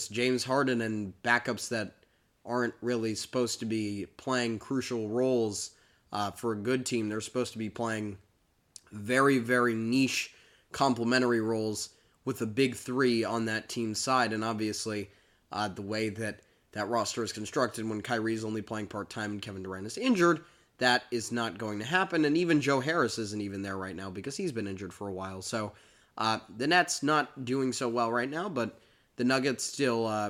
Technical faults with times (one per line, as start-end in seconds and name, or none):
none